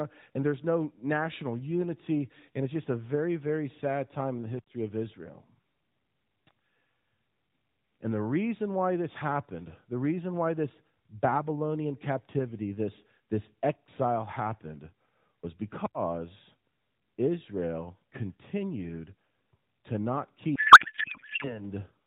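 A codec payload misread runs from 20.56 to 21.62 s. The receiver unpacks octet-aligned AMR frames as if they were bandwidth-efficient, so every field lands in the wrong bits, and the speech gives way to garbled, warbling noise that barely tracks it. The surrounding AMR narrowband audio, capped at 4 kHz, fits a 12.2 kbps mode.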